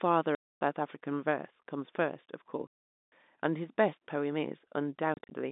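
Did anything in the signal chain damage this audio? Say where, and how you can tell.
Yes. The damage is in the network stage: packet loss filled with silence. The speech drops to dead silence from 0.35 to 0.61 s and from 2.67 to 3.12 s, and a cluster of short holes between 5.14 and 5.31 s adds up to 110 ms, none longer than 30 ms. Each gap has hard edges and lasts a whole multiple of 10 ms, which points to 10 ms packets. The telephone-band G.711 coding itself is clean. Unlike a concealed loss, nothing is smeared or repeated across the holes. Unlike a buffer underrun, the gaps come in bursts with no regular spacing.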